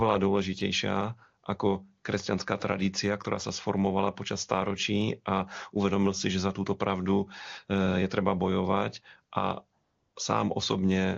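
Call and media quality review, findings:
AMR comfort noise, 9.83 to 10.15 s. Real background drops out for about 320 ms and a smooth, steady synthetic hiss fills the gap. Phone side judged the talker silent, stopped sending speech frames, and the receiver made up the noise from a rough level and spectrum sketch. The AMR wideband (HD Voice) codec sounds clean on either side of the gap, which fits a top-rate mode like 23.85 kbit/s.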